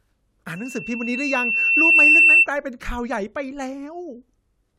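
Speech with a loudspeaker feedback squeal from 0.56 to 2.47 s: a 2.7 kHz tone swells over roughly a second and a half to far above the speech, unlike a steady whine.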